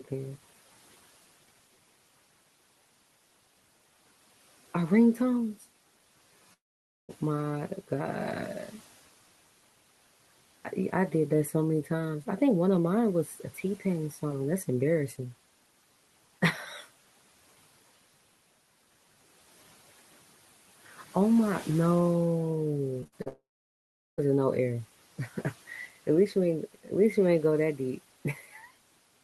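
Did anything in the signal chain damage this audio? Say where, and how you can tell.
Yes. Long network dropout at 6.53–7.11 s and 23.28–24.20 s: the sound smears into a fading buzz, then silence, losing about 0.56 s and 0.9 s, likely at the network stage.

Repeated packet loss (robotic sound) at 23.01–23.28 s: four short holes, none longer than 50 ms, are patched by repeating the last sound, giving choppy audio with pieces missing in the network path.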